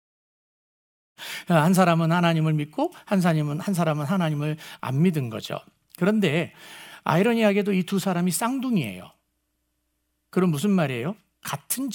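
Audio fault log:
No faults heard anywhere in this audio.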